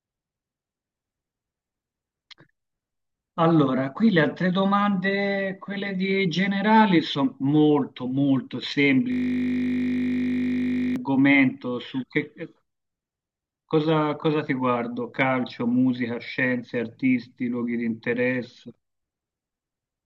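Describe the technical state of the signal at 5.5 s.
At 5.5 s the speech signal is intact, with no dropout, distortion, glitch or other technical fault audible at that moment.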